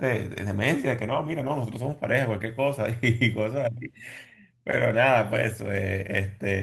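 No technical faults can be heard anywhere in this recording of speech.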